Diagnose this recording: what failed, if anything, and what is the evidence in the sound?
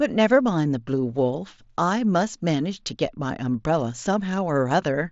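Nothing in the chain has failed: the speech arrives over a Bluetooth mSBC headset link working as designed, with content reaching up to about 8 kHz and only the light grain on louder moments that fits that codec's fixed bit pool at roughly 61 kbps.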